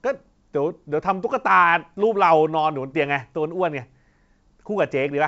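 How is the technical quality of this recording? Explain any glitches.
No glitches detected here.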